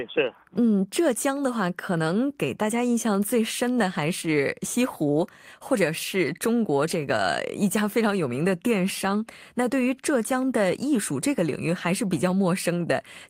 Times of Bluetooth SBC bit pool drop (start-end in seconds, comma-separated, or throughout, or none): none